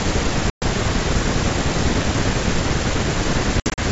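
At 0.50 s there's a hard-edged silent hole of about 120 ms, and again from 3.60 to 3.81 s the same amount goes missing in scattered gaps, the longest about 60 ms. That's packet loss on an ADPCM call. Each loss is roughly seven packets. The decoder's predictor and step size drift from the sender's, so the speech comes back slightly distorted, settling within tens of milliseconds. The G.722 wideband coding itself stays clear.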